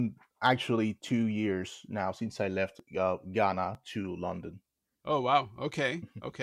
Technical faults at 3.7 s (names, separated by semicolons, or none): dropped buffer (overrun)